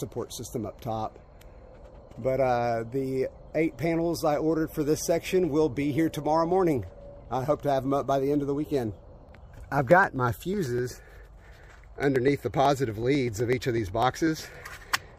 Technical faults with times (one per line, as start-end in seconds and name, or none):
8.92-15.02 periodic USB or driver dropouts